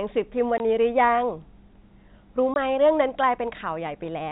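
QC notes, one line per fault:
0.58–0.60 s and 2.54–2.56 s: packet loss filled with silence. Two 20 ms dropouts where the audio cuts to dead air with hard edges, each fitting one lost 20 ms packet.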